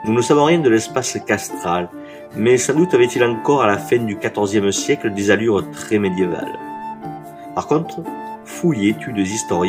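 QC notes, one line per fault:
No faults heard.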